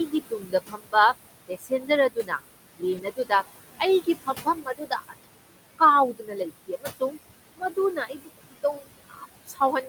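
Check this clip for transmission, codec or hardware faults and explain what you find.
Three things stand out: a noise suppressor working hard across the whole clip, repeated stretches where it eats into the speech, and one lost packet that was patched from error correction.

The noise suppressor artifacts run from start to finish. The suppressor is pulling down what it judges to be steady noise by about 19 dB, band by band and frame by frame. The room noise underneath, sitting about 13 dB below the speech, drops away in the gaps and creeps back under the talking.

The speech cut by the noise suppressor shows up six times: 0.08 to 0.95 s, 1.48 to 2.4 s, 2.78 to 3.32 s, 3.79 to 5.81 s, 6.13 to 7.17 s, and 7.56 s through to the end. The suppressor mistakes quieter parts of the speech for noise and turns them down with the background, by about 17 to 21 dB at the deepest points. Each of the first five stretches loses somewhere around a third to half a second in total. 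Soft consonants and word tails sound swallowed or go faint.

There's also a lost packet rebuilt from error correction at 2.97 to 2.99 s, which lands inside the 2.78 s cut. One 20 ms packet went missing, and the decoder filled it with the low-bitrate backup copy that Opus in-band FEC carries in the next packet. You don't get a gap. That brief frame just sounds rougher and noisier than its neighbours.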